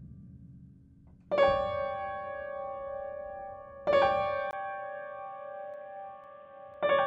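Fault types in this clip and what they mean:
Input switched to a poorer device: At 4.51 s there's a 20 ms gap, then the sound turns dull and boxy with nothing above 3.8 kHz, about 5 dB quieter, and a new noise floor well below the signal. That's likely the recording jumping to a narrower-band input.
Periodic USB or driver dropouts: Something keeps stalling the audio path every 0.5 s, from about 5.74 s to 6.74 s. Each time, a tiny sliver, well under a millisecond, goes silent, so you get a few evenly spaced ticks riding on the sound.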